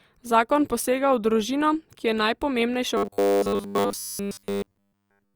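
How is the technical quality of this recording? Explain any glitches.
The recording has one clear glitch: robotic sound from repeated short buffers, from 2.97 s through to the end at 5.35 s. From that point the voice turns into a rigid, metallic buzz pitched at 100 Hz that still roughly tracks the speech. The likely cause is audio arriving too seldom, so playback keeps looping the last small chunk while the real audio is skipped. A 100 Hz buzz fits a chunk of about 10 ms, and essentially the entire stretch is made of these repeats.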